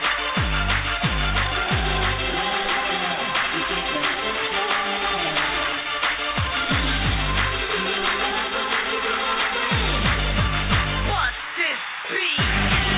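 Nothing goes wrong here, the audio just comes through a G.711 A-law call path at 64 kbps, so everything above 4 kHz is missing the way it is on an ordinary phone line, and there's nothing else to point out.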